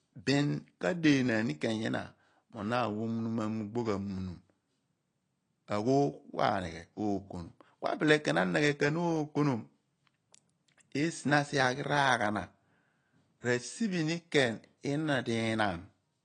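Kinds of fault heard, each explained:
AAC compression: The speech is dull throughout, with nothing above about 10.2 kHz, and the codec damage is plainly audible as a smeared, swirly texture on sustained vowels and a fizzy edge on sibilants. This is likely AAC-LC coding at a low rate, which fits roughly 32 kbps. A plain low-pass filter would remove the top cleanly, whereas here the remaining band also warbles where the coder has thinned or filled the spectrum.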